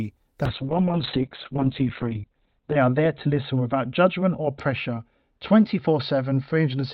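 From 0.47 s to the end there's a call bitrate drop: the encoder goes from about 32 kbps down to 6 kbps, bottoming out for roughly 2.3 s. Bandwidth shrinks from 20 kHz to 4 kHz, so the speech turns muffled, coarse and a bit watery.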